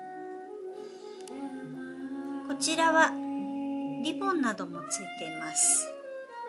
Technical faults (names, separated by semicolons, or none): resampler restarted on every block